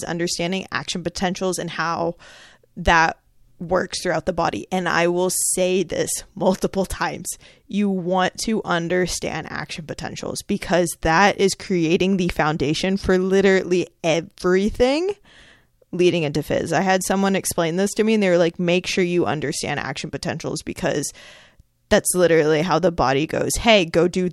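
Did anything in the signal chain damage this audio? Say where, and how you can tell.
No, nothing in the signal chain has damaged this speech recording; every stage from capture to playback leaves the signal intact, with no audible faults at any point.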